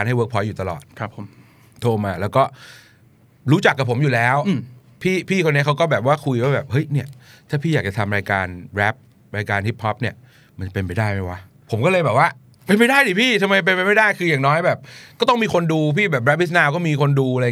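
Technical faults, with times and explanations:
No technical faults detected.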